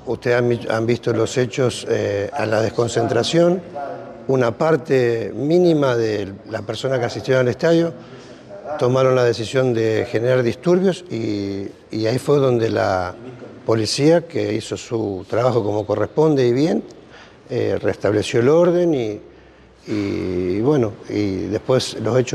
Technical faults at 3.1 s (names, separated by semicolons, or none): none